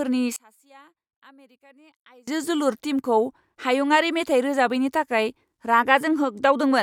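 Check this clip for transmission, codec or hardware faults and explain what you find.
One fault is present, between 0.36 and 2.28 s, where the speech collapses to a faint residue about 32 dB down. The likely cause is one channel inverted: with one stereo side's polarity flipped, everything common to both sides cancels in the mono sum, leaving only their small differences. A plain gain drop or dropout would lower or silence the sound evenly. Here what remains is a faint copy of the speech.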